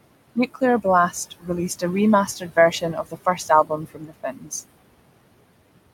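Noise suppressor artifacts run through the whole speech clip. The suppressor pulls down the bands it judges to be steady noise by about 21 dB, frame by frame. The room noise, sitting about 15 dB below the speech, drops away in the pauses and comes back up under each phrase.

Speech cut by the noise suppressor first appears from 1.31 to 1.49 s. For roughly a tenth of a second, low-level speech energy is treated as noise and turned down by as much as about 20 dB, so a soft sound there comes out swallowed. The same fault returns across a longer stretch from 2.27 to 4.52 s, with drops of up to about 19 dB. Around a second in total within that span loses quiet consonants and endings, which sound faint or clipped off.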